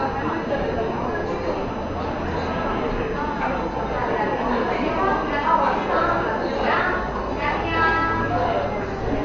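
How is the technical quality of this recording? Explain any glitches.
The technical quality is poor, with heavy codec damage from start to finish. Throughout, the sound is dull and rough, with nothing above 6.9 kHz and a fluttering, grainy noise clinging to tonal parts. This is likely Dolby Digital compression at a very low bitrate, consistent with roughly 48 kbps: the encoder narrows the band and starves many frequency lines of bits, so the decoder substitutes noise. A spectrogram would show a hard ceiling at 6.9 kHz and speckled, patchy energy beneath it.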